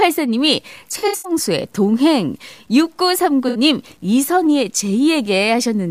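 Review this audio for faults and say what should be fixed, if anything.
From 0.38 s to the end, the speech carries a grainy distortion that rises and falls with the signal. Quiet moments turn gritty rather than clean. This is likely low bit depth without dither, with samples truncated to about 9 bits. The error sits roughly 40 dB below the signal. Keep a higher bit depth, and add dither whenever reducing it.

Between 0.98 s and 1.32 s, AAC frame loss with concealment smears the speech. About 190 ms is missing, scattered across the stretch. The longest single gap is around a tenth of a second. The decoder fills each gap from the last good spectrum, so the sound turns phasey and noisy. A second 64 ms loss at 3.48 to 3.58 s causes a shorter smeared patch. Protect the stream against packet loss with error correction or retransmission.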